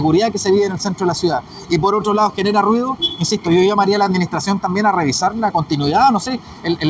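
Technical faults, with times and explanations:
Throughout: clock drift between sender and receiver. The sending side's audio clock runs roughly 3 percent slower than the receiver's, so fewer samples arrive than the receiver plays out and its jitter buffer keeps draining. To avoid running dry, the receiver repeatedly stretches the audio by repeating short pieces. The result is a faint, recurring unevenness in timing across the whole clip rather than any single obvious glitch.
0.23 to 6.55 s: repeated timing corrections. Across this stretch the receiver keeps inserting short repeated segments to keep pace with the slower sender, so playback runs at about 97 percent speed and gains around a fifth of a second in total. Every edit goes the same way, lengthening the audio, but the edits are spaced irregularly. Each one is small and is heard, if at all, as a slight hiccup or an unsteady tempo in the G.722 call audio, which has nothing above 8 kHz.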